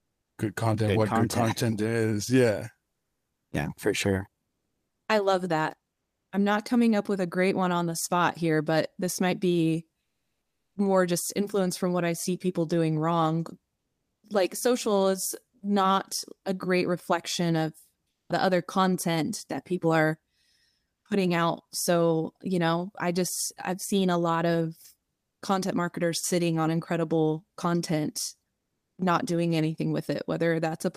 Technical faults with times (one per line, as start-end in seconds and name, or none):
10.01-10.75 comfort noise in place of the background
18.09-18.29 comfort noise in place of the background